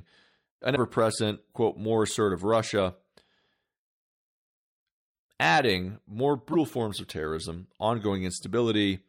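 Damaged data in a compressed stream appears twice, at 0.72 to 0.77 s just before "present quote more assertive", and at 6.49 to 6.55 s between "adding more" and "forms of terrorism". In each place a stretch of the compressed speech arrives corrupted, so the decoder misreads those frames, loses sync and hunts for the next valid header. The result is a short chirp or blip of about 50 ms cutting into the speech.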